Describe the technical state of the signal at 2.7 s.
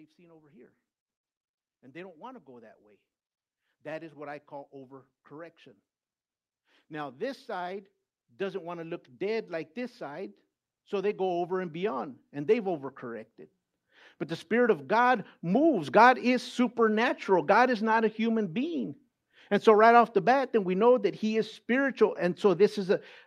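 Automatic gain control is rising, from 1.91 to 5.61 s, lifting level by about 5 dB, so speech and background swell together gradually.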